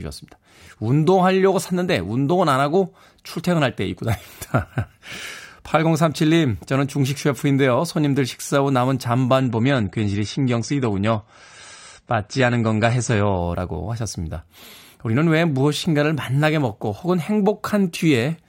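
A speech recording where, from 9.40 s to 13.40 s, the treble abruptly vanishes above 9 kHz and the sound turns duller and more processed, with no gap at either switch. That's an adaptive stream at a lower bitrate, briefly falling back to a leaner encode, consistent with a step down from roughly 96 to 32 kbit/s.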